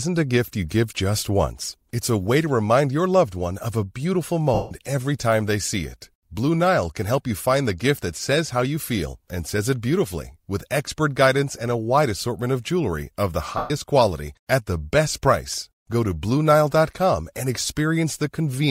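Lost LE Audio frames at 4.54 s (about 165 ms) and 13.57 s (about 130 ms) in this speech clip: the LC3 decoder repeats the last spectrum with scrambled signs, smearing tones into noise. The gap lengths fit 7.5 ms LC3 frames. The light lossy compression is faint beside these dropouts.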